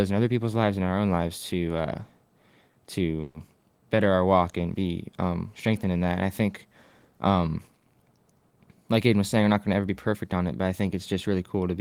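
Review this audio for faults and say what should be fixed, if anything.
At 3.21 to 3.36 s the speech stops moving and its last sound is stretched into a fading buzz for about 130 ms, then resumes exactly where it left off, with nothing skipped. That is a call audio freeze, likely from packets held up in transit until the jitter buffer ran dry. Unlike packet loss concealment, the speech is delayed rather than lost, so the clip afterwards runs about 130 ms late. A deeper jitter buffer target would absorb delay spikes of this size.

From 9.07 to 10.33 s the speech runs at about 110% speed while its pitch stays the same, so it sounds hurried. This is a jitter buffer speed-up: with excess audio queued, the receiver repeatedly cut out short pitch-period slices, around 150 ms in all, to catch up. Resampling would raise the pitch along with the speed, and a dropout would leave one audible hole, but here the shortening is made of many small cuts across the stretch. 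Draining excess buffer more gradually, preferably during pauses, would prevent this.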